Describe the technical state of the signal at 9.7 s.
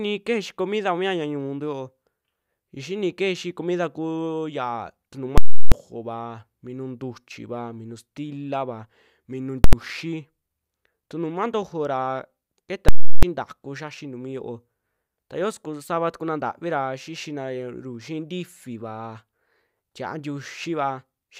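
A very loud pop at 9.64 s and another at 9.73 s, with silence between: invalid numbers at full scale, where infinite results pinned an 85 ms block, fitting 4096 samples, at one extreme value far beyond the speech peaks.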